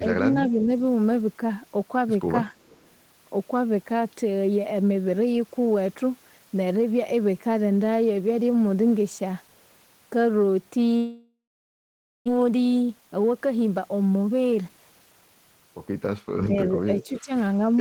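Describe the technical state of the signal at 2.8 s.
At 2.8 s a faint, delayed copy of the speech trails the original by about 340 ms, sitting well below the main signal, from 2.56 to 2.87 s. This is an echo leak, likely from a loudspeaker at the far end whose echo canceller let some of its microphone pickup return down the line.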